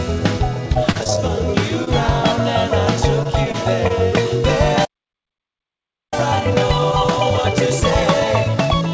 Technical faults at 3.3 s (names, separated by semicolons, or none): repeated packet loss (robotic sound)